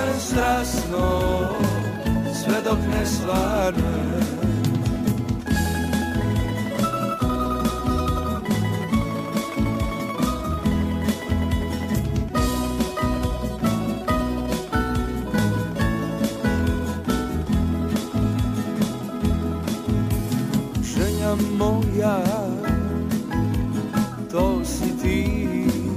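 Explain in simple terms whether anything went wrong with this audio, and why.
A crude rate conversion runs through the whole clip. Samples were simply repeated to change the sample rate, apparently from 32 kHz to 44.1 kHz, which adds a gritty, out-of-tune fizz. Unlike ordinary distortion, this fizz doesn't match the pitch of the sound. It rises with loud or high sounds.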